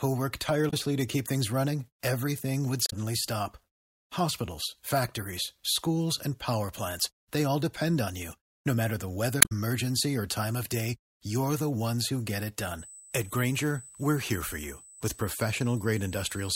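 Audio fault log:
0.67–0.74 s, 2.86–2.93 s, 9.39–9.52 s: damaged data in a compressed stream. Corrupted frames make the decoder lose sync. Each becomes a brief glitch in the speech.
12.79–16.56 s: USB whine. A steady 8 kHz tone, roughly 20 dB below the speech, sits under the audio. USB microframe current leaks through power or ground.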